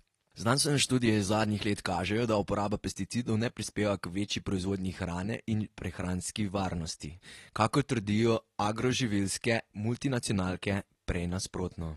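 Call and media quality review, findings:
Speech sounds dull and smeared for the whole clip, with plainly audible codec damage. Nothing comes through above roughly 12.4 kHz, a hard top-end ceiling. Probable component is the encoder, likely AAC compression (AAC-LC) at a low rate; the damage level fits something around 32 kbps. Mechanism: with so few bits per frame, the encoder drops the band cut-off and quantises the remaining frequency lines coarsely, so detail gets thinned and blurred. Worth checking the encoder bitrate setting first.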